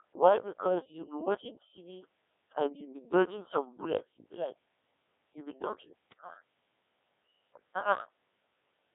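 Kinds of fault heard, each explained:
Codec 2 vocoder: The whole clip sounds like a parametric low-rate vocoder, and its character is consistent with Codec 2 at about 1.6 kbit/s. Only pitch, voicing, energy and a coarse spectral envelope are sent, and the decoder rebuilds the speech from summed sine waves, so the original waveform is lost. The damage is heavy. The speech comes out buzzy and robotic, and it is confined to roughly 300 Hz to 3.5 kHz.
Bit errors on digital voice radio: From about 6.11 to 6.21 s, just after "you'll be dodging", corrupted bits reach the vocoder. At this low rate each bit drives a whole frame's pitch, level, voicing or spectrum, so a few flipped bits, at an error rate of around 2 percent, wreck entire frames. The short burst, matching roughly three frames, jumps in pitch and level and breaks into a garbled warble.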